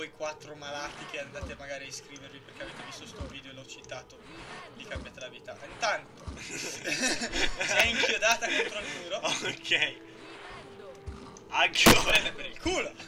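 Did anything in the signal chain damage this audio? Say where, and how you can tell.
Yes. There's a short burst of loose connector crackle in the analogue wiring, from about 11.75 to 12.11 s, so roughly a third of a second near the end. You hear it as an irregular scratchy crackle riding on the sound rather than a clean click. That's what a worn or dirty contact does when it gets nudged: the signal path makes and breaks over and over, chopping the audio, and any DC sitting on the line turns each reconnect into a little pop.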